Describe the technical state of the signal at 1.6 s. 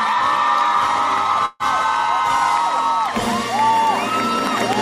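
At 1.6 s a call audio freeze runs from 1.45 to 1.63 s: the last sound stretches into a buzz or hiss, likely from delayed packets draining the jitter buffer. Unlike a dropout, nothing is lost; the audio resumes where it stopped, 144 ms late.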